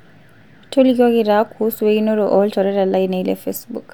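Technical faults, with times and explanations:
No technical faults can be heard in this speech recording.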